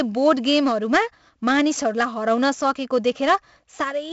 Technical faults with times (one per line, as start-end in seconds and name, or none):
0.00-4.12 4-bit ADPCM compression